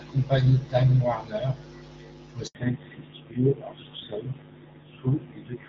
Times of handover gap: 2.47-2.55

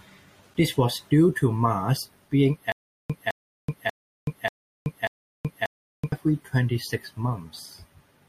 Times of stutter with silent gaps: 2.72-6.12

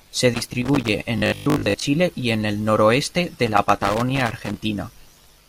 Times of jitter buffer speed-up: none

